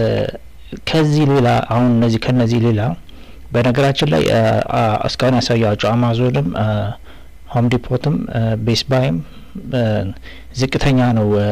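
Hard clipping runs throughout. The signal is overdriven by about 15 dB, so a large share of the waveform is sliced flat. Every loud sound carries harsh fuzz.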